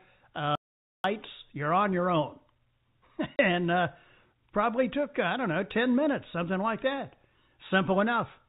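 An audio dropout to silence runs from 0.55 to 1.04 s in this telephone-band speech, carried in G.711 A-law with nothing above 4 kHz, and ends just before "you're on your own". For about 0.49 s the signal falls to silence with no room tone underneath, and whatever was said there is gone. The likely cause is the input being lost while the recorder kept writing zeros. Packet loss filled with silence follows at 3.36 to 3.39 s, just before "and uh", leaving a 30 ms hole with hard edges. Its length points to a single lost packet that the receiver replaced with silence.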